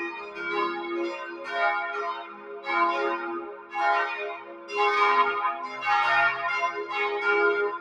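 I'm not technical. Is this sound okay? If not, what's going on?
No. A noise suppressor applied to music or sounds was left switched on. It treats steady, lingering sound as background noise and keeps turning it down, so the level pumps up and down, with held parts and fading tails thinning out while sudden hits pass through.

In five spots the sound is cut by the noise suppressor: around 0.13 to 0.4, 1.16 to 1.5, 2.14 to 2.67, 3.4 to 3.75, and 4.35 to 4.72 seconds. Each time it mistakes the sound for noise, so it briefly dips.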